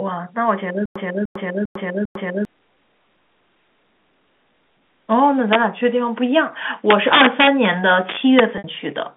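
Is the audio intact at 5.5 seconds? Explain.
No, there's an integer overflow from about 5.53 to 5.55 s. A speech peak pushed the sample values only about 1 dB past the largest integer the path can hold, but instead of being limited there, those samples wrapped around to the opposite extreme. That full-scale sign flip gives a short, violent crack, much harsher than ordinary clipping, heard within the narrow telephone-band sound around it.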